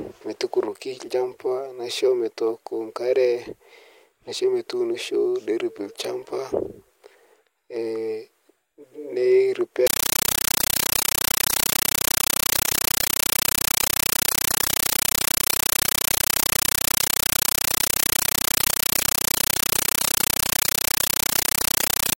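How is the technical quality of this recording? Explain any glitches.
Poor from 9.87 s to the end, where the speech gives way to a compressed stream played as audio. An undecoded AC-3 stream, likely fitting 448 kbps, arrives as samples. Bursts of about 9.33 ms, 31.25 times a second, sound like harsh, loud chattering static. They show as full-band vertical stripes between near-silent gaps.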